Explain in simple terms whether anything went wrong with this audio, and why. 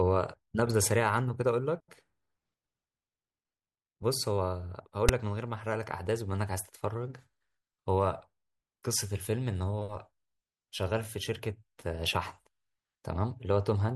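The player read a block of text tags as sound, a fault called file tags played as audio, causing a brief, harsh, lopsided rasp of static at 5.09 s.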